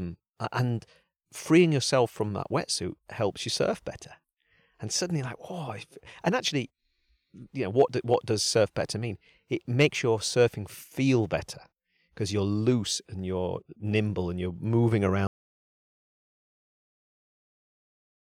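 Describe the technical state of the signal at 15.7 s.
At 15.7 s the signal is in an audio dropout to silence that begins at 15.27 s and runs to the end of the clip. The speech cuts off abruptly mid-flow and is replaced by digital silence, with no room tone or noise floor underneath. The likely cause is a loss of input, such as a disconnected device, a failed link or an unintended mute, while the recorder kept writing silence. Whatever was spoken after 15.27 s is unrecoverable.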